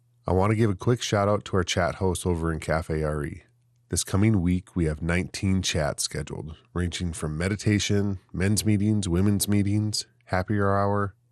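From start to end the speech sounds dull, with a gurgling, grainy edge, most likely from MP2 compression at a low rate, roughly 80 kbps. Starved of bits, upper sub-bands drop out and flicker, so a spectrogram shows a ragged, blinking top edge.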